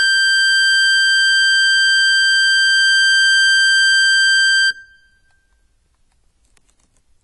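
From start to finish the music sounds dull and smeared, with a warbling, fizzy texture on sustained notes and a top end that stops short. That is likely AAC compression: the AAC-LC coder, short of bits, drops high bands and leaves gaps in the spectrum, and the damage fits a rate near 32 kbps. A plain low-pass filter would only darken the sound, whereas here held tones also shimmer and bubble.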